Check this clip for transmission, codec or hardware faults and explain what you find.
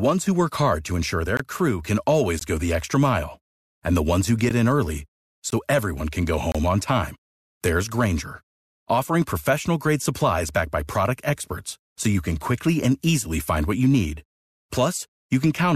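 The speech has one fault type: gap between stream segments, at 1.37–1.40 s, 2.39 s, 4.49 s (after "ones who"), 5.50 s (before "everyone can go") and 6.52–6.55 s (before "on time there's"). Segment timestamps fail to meet at these one-second segment boundaries, and silence fills each gap. You hear brief hard-edged dropouts of 13 to 28 ms, with nothing lost.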